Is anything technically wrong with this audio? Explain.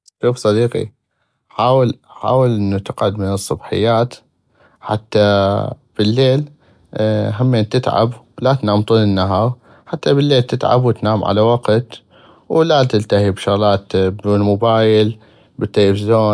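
No, nothing technically wrong can be heard here.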